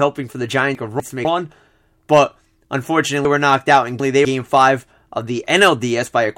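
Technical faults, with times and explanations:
0.75–1.25 s, chunks out of order: Right after "for the", two 250 ms pieces of speech play swapped. One piece arrived a chunk late and plays after the one meant to follow it. Nothing is missing, but the moment sounds jumbled.
3.25–4.25 s, chunks out of order: Just before "five of", a 250 ms piece plays three chunks late. The whole second sounds scrambled.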